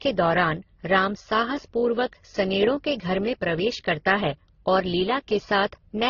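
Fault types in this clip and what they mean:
Transcoding between lossy codecs: the speech sounds like it passed through several low-bitrate codecs in turn, likely an MP3, Opus, MP3 chain. Smeared, warbly artefacts from different codecs stack up, and a spectrogram shows a hard ceiling, with nothing above 6.9 kHz throughout.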